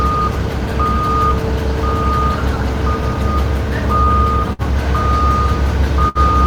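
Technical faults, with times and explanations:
4.53–4.62 s and 6.09–6.18 s, burst of packet loss: each gap is filled with a fading continuation of the preceding sound rather than silence, then resumes about 60 ms further on, skipping material.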